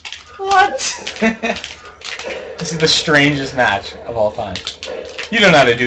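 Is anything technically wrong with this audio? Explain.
No, nothing technically wrong can be heard anywhere in this audio.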